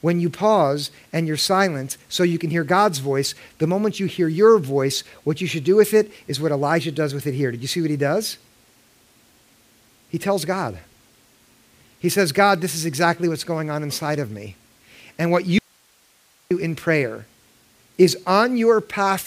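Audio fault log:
15.59–16.51 s, audio dropout to a faint residue: sound cuts abruptly to hiss about 40 dB down for 0.92 s before "in prayer", likely a live path that briefly lost its input, not a pause or fade.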